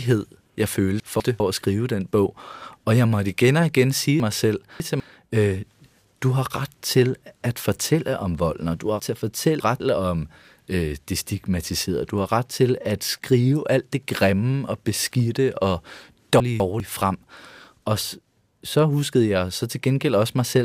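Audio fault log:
1.0–1.4 s, 4.2–5.0 s (after "igen og igen sige"), 9.0–9.8 s (between "om volden og du" and "om øh det stigmatiserede"), 16.4–16.8 s (after "grimme og beskidte og"): chunks out of order. A 200 ms block plays one or three blocks late, jumbling the sound across the hard joins. Unlike dropouts or stutters, nothing is lost or repeated; only the order is wrong.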